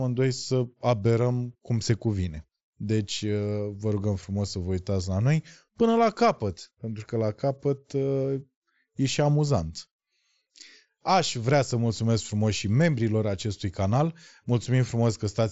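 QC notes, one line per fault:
The speech comes through a Bluetooth mSBC headset link, with its content stopping at about 7.7 kHz as that wideband path allows, and no faults are present.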